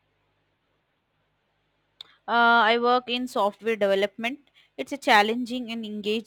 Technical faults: crude rate conversion

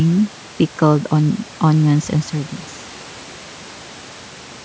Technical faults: none

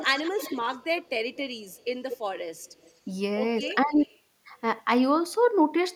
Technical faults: echo leak; speech suppressed in double talk

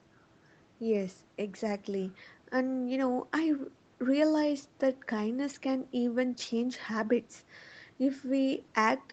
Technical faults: none

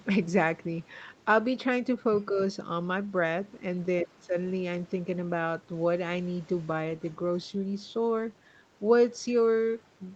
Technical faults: speech suppressed in double talk

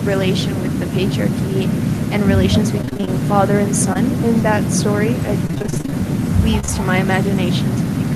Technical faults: echo with no canceller; repeated packet loss (robotic sound); short concealed packet loss

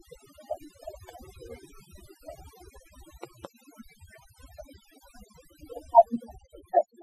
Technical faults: overdone noise removal; loud pop

